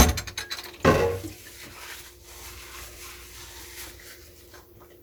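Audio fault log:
Nothing stood out on listening to this sound.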